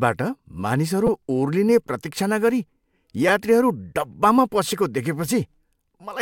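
Repeated buffer at 1.07 s, just before "ओर्लिने प्रतीक्षा नगरी", at 3.29 s before "यात्रीहरू डब्बामा", and at 4.69 s right after it. Fresh audio arrived late, so the device replayed the same 5.8 ms block, which fits a 256-sample buffer, two or three extra times. Each event is heard as a brief buzzy click.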